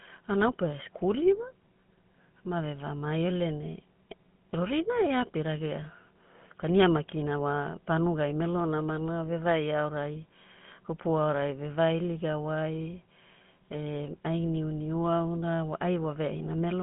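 Speech, passed through a GSM full-rate codec throughout. Buzzy, gravelly roughness, fitting 13 kbps coding. Band runs 150 Hz to 3.4 kHz, nothing above 3.8 kHz.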